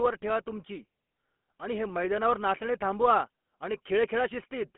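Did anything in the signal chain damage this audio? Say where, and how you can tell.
Yes. The damage comes from the codec stage and runs through the whole clip. It is the GSM full-rate codec, at a rate that fits 13 kbps. Speech sounds plainly buzzy and gravelly. Nothing passes above 3.7 kHz, within a 200 Hz to 3.4 kHz line band. The codec rebuilds the voice from a vocal-tract filter fed by sparse, evenly spaced pulses, which causes that rough texture.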